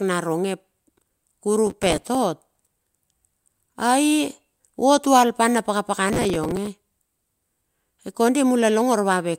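From 1.67 to 2.15 s and again from 6.08 to 6.67 s, processor overload crackle tears through the speech: many very short buffers, around 5 ms each, miss their deadlines and replay stale audio with hard edges. The result is a gritty burst rather than one isolated click.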